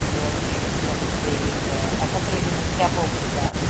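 Nothing in this speech stood out on listening, and the call microphone processing it passed through, with its trimmed lowest bass and nothing above 8 kHz, is normal rather than a fault.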